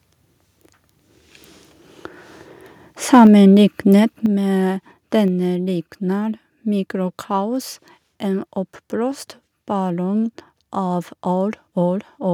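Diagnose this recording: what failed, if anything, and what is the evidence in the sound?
From 3.13 to 3.27 s the loudest stretch of speech turns harsh and crackly, with flattened peaks rather than clean transients. This is microphone overload at the converter stage: the input gain was likely set so high that the signal ran about 2 dB past full scale, and around a tenth of the samples in that stretch were cut off at the limit. That squaring of the waveform tops is what produces the gritty edge.

Right after the overload, at 3.27 s, the speech and the background both drop in level by about 2 dB. At 4.26 s there is a second, larger drop of about 7 dB. Each drop happens instantly, with no gradual fade. This is the microphone volume being stepped down in call processing, likely an automatic gain control reacting to the clipped peak by cutting the device's input volume in discrete steps. Because the gain applies to the whole input, the background falls together with the speech.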